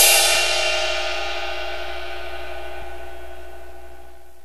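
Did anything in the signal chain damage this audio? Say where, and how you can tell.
Yes, at the codec stage. There is damaged data in the compressed stream. Short blips sound at 0.35 s and 2.81 s, each under 20 ms. Corrupted bytes there made the decoder misread frames, lose sync and hunt for the next frame header.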